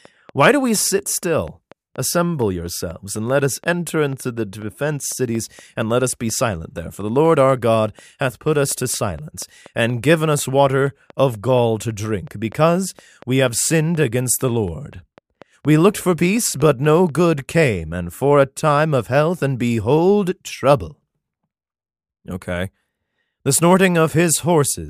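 From 0.05 to 17.1 s, a train of clicks ticks steadily at about 4.2 per second over the speech and pauses, stopping before "good came and for"; likely interference or a faulty connection or power supply.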